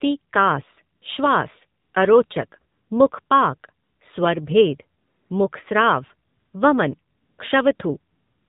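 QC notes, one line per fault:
throughout: AMR narrowband mobile codec, at 7.4 kbps with plainly audible damage. Nothing above 4 kHz survives, so the speech has the boxed-in telephone sound. The low bitrate leaves too few excitation pulses per 5 ms for the vocal-tract model, and voiced sounds come out buzzy and synthetic. A plain low-pass filter would only dull the top end. This codec also changes the texture of the sound itself.
0.96 to 8.48 s: AMR comfort noise, eleven pauses between 40 ms and 335 ms long, with the last one running to the end of the clip. The longest pauses come from 5.0 s on (335, 300, 260 and 220 ms). In each pause the sender stopped transmitting speech frames and the receiver filled the gap with smooth, steady synthetic noise built from a rough level and spectrum estimate. The filler is noise that switches in and out, not silence and not repeated sound, which sets it apart from a packet-loss dropout or concealment. 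The switching can also clip quiet word endings.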